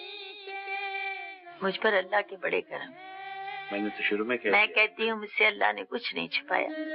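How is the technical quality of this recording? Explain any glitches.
Nothing here to explain: there's no glitch anywhere in the recording, so it runs smoothly from the opening moment to the last.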